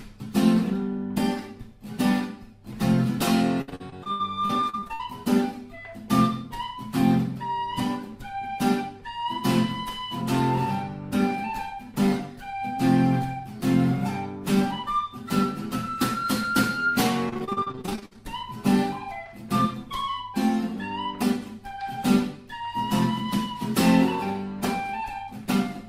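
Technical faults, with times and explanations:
3.61–5.01 s, repeated packet loss (robotic sound): fourteen short dropouts, the longest about 79 ms, each patched by stretching the preceding sound. About a third of this stretch, roughly 460 ms, is filled in, giving a choppy texture.
17.29–18.24 s, repeated packet loss (robotic sound): a denser run of closely spaced holes, the longest about 56 ms, each covered by continuing the last audio. Concealment covers nearly half the span, about 420 ms, so the sound turns choppy and stuttering.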